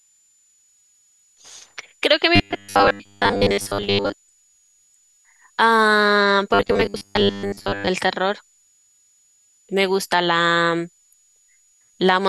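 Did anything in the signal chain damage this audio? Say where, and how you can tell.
Yes. A faint high whistle, wandering between about 6.7 and 7.1 kHz and sitting roughly 35 dB below the speech, runs through the whole clip. That is a switching supply whistle, a power supply running in audible burst mode or beating with another one, leaking into the analogue wiring.

From 2.36 to 4.15 s and again from 6.54 to 7.89 s, the speech turns into a rigid, metallic 100 Hz buzz. This robotic sound likely comes from repeated short buffers at the driver or buffer stage, with one 10 ms buffer replayed in place of most of the real audio.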